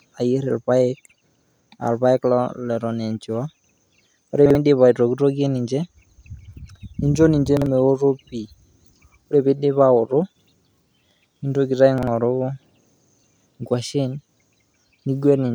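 A speech clip with three brief jumbled stutters at 4.46–4.55 s, 7.57–7.66 s (between "ninjo ninje" and "meoto pii") and 11.98–12.07 s. These are chunks out of order: each time, a 46 ms chunk plays one chunk late, producing hard joins.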